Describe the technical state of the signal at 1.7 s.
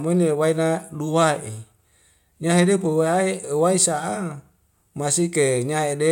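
At 1.7 s the speech signal is intact, with no audible fault at that moment.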